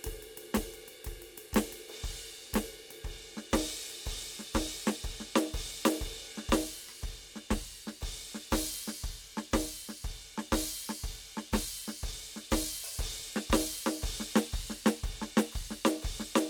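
No technical faults can be heard anywhere in this music.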